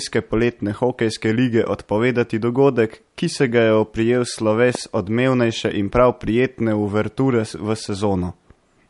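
MP3 compression runs throughout the speech, likely from a low-bitrate encode; the damage fits roughly 48 kbps. Nothing remains above 11.2 kHz, and weak frequency lines flicker on and off between frames, giving a watery, swirly texture with metallic chirps on s sounds and smeared attacks.

A loud pop lands from 4.75 to 4.77 s, right after "se ga je oprijel" and before "odmevnejše in prav prijetne". A single sharp click, roughly 10 dB above the speech, sits on top while the speech continues beneath, likely a sudden voltage step from a plug, switch or static discharge.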